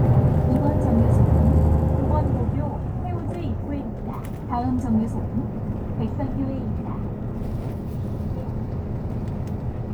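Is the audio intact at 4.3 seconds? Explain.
Yes, the audio is intact at 4.3 seconds, with no fault at that moment.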